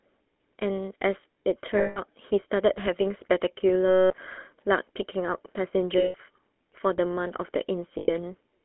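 From start to finish the speech has a buzzy, gravelly roughness, confined to a narrow telephone band of roughly 250 Hz to 3.4 kHz. This is the GSM full-rate codec, which models the vocal tract and drives it with a coarse pulse excitation, consistent with a 13 kbps stream.

At 1.78 to 1.99 s, 3.88 to 4.15 s, 5.98 to 6.16 s and 7.98 to 8.09 s, the sound freezes into a rough, metallic ring. These are lost GSM frames, lasting 180, 220, 160 and 100 ms. The decoder reuses the last good frame's settings with declining gain.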